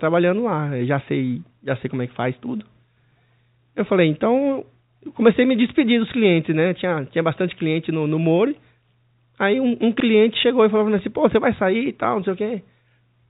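Nothing is technically wrong with this speech clip, which carries the narrow band of ordinary G.711 telephone coding.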